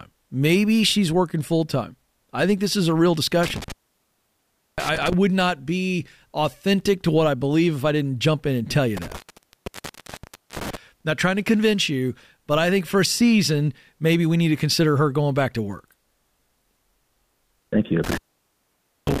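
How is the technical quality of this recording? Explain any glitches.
The recording has intermittent contact, where the signal path repeatedly breaks. Dropouts occur at 3.35–5.14 s (open for about 1.06 s), 8.97–10.77 s (about 1.40 s) and 18.04–19.2 s (about 0.90 s, running to the end). A loose plug or cable conductor separates and reconnects, so the speech cuts out abruptly with crackle at each edge as the contact scrapes. Faint hiss remains while the line is open.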